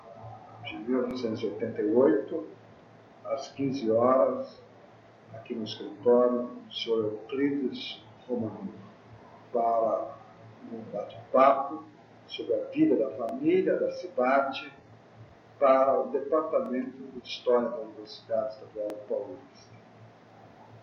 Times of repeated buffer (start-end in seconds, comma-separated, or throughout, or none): 1.11-1.13, 13.29-13.31, 16.66-16.68, 18.90-18.92